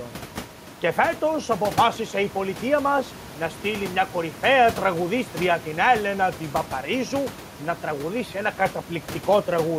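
No technical faults are present.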